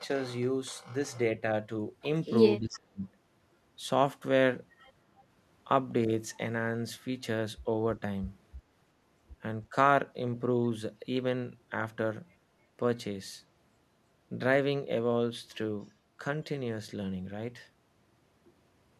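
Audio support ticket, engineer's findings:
Speech suppressed in double talk. 2.59–3.05 s: speech drops out almost completely, a near-total cut of about half a second. 9.70–9.74 s: brief, shallow dip of a few dB. Likely cause is the echo canceller's suppressor during double talk: with both ends talking, it cannot tell near-end speech from loudspeaker echo and attenuates both, deeply in the first instance and only lightly in the second.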